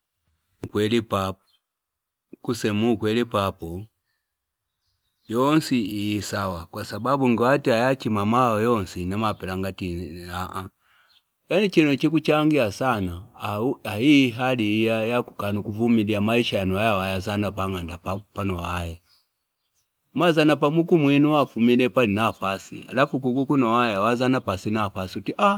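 Nothing in the speech stood out as a technical problem on listening.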